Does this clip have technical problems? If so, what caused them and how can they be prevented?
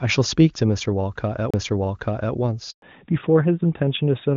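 Yes. There are three faults.

At 1.51 s a CD skip interrupts the speech. A mute of about 30 ms occurs, after which playback resumes from a different point. The tracking servo lost its place on the spiral, probably from a knock or a surface flaw, so the laser landed on another turn before audio output restarted. This can be prevented by cleaning or replacing the disc, isolating the player from vibration, or ripping the disc with an error-correcting extraction tool.

From 2.70 to 2.82 s there is a handover gap. The speech fades within a few tens of milliseconds into 120 ms of silence, and whatever was said in that window is gone. The phone was switching the call between networks, and no speech frames were delivered until the new link came up. This can be prevented by using a network and handset that support seamless handover, or by staying in a location with stable coverage of one network.

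From 2.82 s to the end there is a fallback to narrowband. Before this point, the wideband AMR-WB coding sounds clean and points to a high-rate HD Voice mode. After it, all content above 4 kHz disappears and the speech turns duller and rougher, consistent with AMR narrowband. The call renegotiated down from wideband, most likely because the new network leg lacked HD Voice support. This can be prevented by keeping both ends and the whole network path HD Voice capable, so the codec never needs to drop to narrowband.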